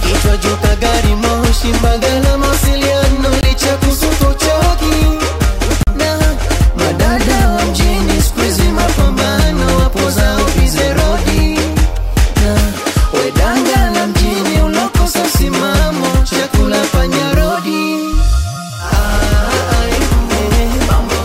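A short hole at 3.41 to 3.43 s, then a twice as long pop-like hole at 5.83 to 5.87 s, mark two blocks of digital silence, 20 ms and 40 ms. Each time the output buffer likely went unfilled, and the sound cut out abruptly.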